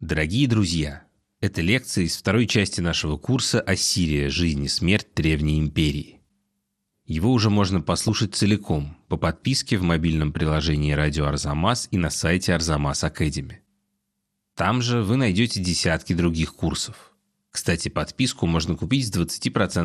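Throughout the speech, the top end sounds dull. A granular, gurgling distortion clings to it. Upper bands seem to drop in and out. That points to MP2 compression, likely at a low rate near 80 kbps, starving its sub-bands of bits.

From 7.96 to 8.09 s there is a brief burst of DAB burbling. Bit errors have slipped into the audio data, at a fraction of a percent. Six frames are hit, and wrong samples put short blips of noise into single bands.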